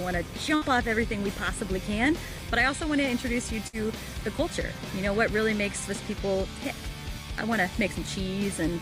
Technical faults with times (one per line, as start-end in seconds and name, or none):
0.55-0.64 burst of packet loss
3.67-3.76 burst of packet loss